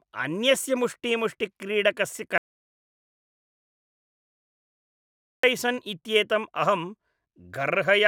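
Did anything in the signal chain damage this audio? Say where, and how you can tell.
Yes. The speech undergoes an audio dropout to silence from 2.38 s to 5.43 s, losing about 3.06 s of sound. The signal cuts off abruptly and returns just as abruptly, and the gap holds silence with no room tone underneath. On the waveform that stretch is a flat line. On a spectrogram it is a fully black band across every frequency. The likely stage is the input link or capture device: the connection dropped or was muted while the recorder kept writing silence.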